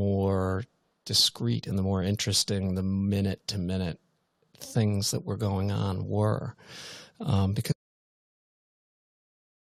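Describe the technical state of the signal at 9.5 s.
At 9.5 s the input has been lost, most likely through a disconnected device, a failed link or a stray mute, while the recorder kept writing silence. This audio dropout to silence runs from 7.72 s to the end, cutting the speech mid-flow into dead silence with no room tone.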